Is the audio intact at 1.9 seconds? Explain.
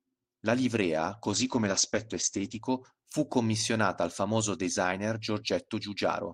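No. A call bitrate drop runs from 1.32 to 2.69 s: the encoder was starved of bits, which fits a fall from about 40 kbps to 11 kbps, so it coded coarsely and cut the top end from 20 kHz to 8 kHz. The speech turns muffled and rough until recovery.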